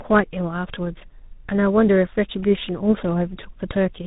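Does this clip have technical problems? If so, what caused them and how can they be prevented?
Yes. Throughout the clip, tandem speech coding is audible: the call passed through two separate speech codecs in a row, the sound pointing to a GSM full-rate leg and then G.726, each re-encoding the previous one's already degraded output. The errors compound, leaving speech rough, muffled and warbly, with nothing above 3.8 kHz. Prevent it by negotiating one codec end to end or using transcoder-free operation so the speech is compressed only once.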